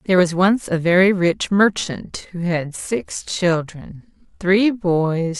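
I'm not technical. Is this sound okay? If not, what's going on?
No. A time-stretched section runs from about 1.69 s to the end of the clip. From that point the speech suddenly slows to about 0.7 times its normal pace, yet the pitch stays the same, so it drags. The likely cause is software that lengthened this part to fill a set duration, keeping the pitch steady by repeating short slices of sound, which produces that drawn-out quality.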